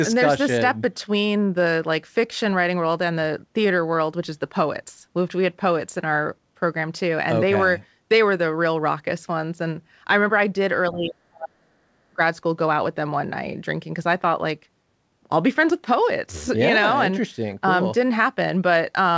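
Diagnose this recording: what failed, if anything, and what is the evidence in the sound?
From 10.92 to 11.91 s the speech sinks abruptly, falling by around 35 dB at its deepest, then recovers, only to dip again briefly from 12.1 to 12.2 s by around 25 dB. This pattern points to speech suppressed in double talk at the call-processing stage. The echo canceller likely mistook the near talker for loudspeaker echo while the far end spoke and attenuated both. The band limit near 8 kHz fits the G.722 call codec.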